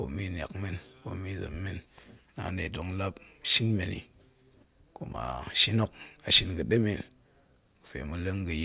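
Nothing technically wrong turns up anywhere in this short speech recording, so there are no times or causes to give.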